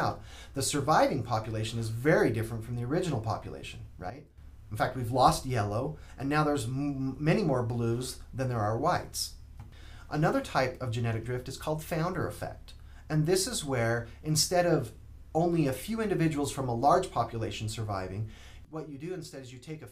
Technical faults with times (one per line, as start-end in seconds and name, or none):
4.10-4.38 sudden gain jump
18.65-19.91 sudden gain jump